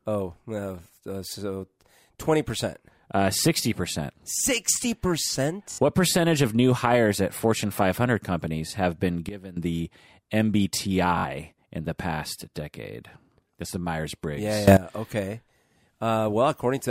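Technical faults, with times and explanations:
5.72 to 5.78 s, repeated buffer: a 21 ms slice plays three extra times with hard joins, a brief stutter fitting a 1024-sample buffer. About 70 ms of speech is lost.
9.29 to 9.57 s, sudden gain jump: just after "companies have been", speech and background drop about 16 dB at once, likely from a gain change applied without a ramp.
11.18 to 11.24 s, repeated buffer: a 21 ms slice stutters three extra times before "in the past decade". New audio arrived late, costing about 70 ms.
14.68 to 14.77 s, sudden gain jump: level and noise leap up about 18 dB together, likely a digital gain step with no smoothing, heard as an abrupt burst.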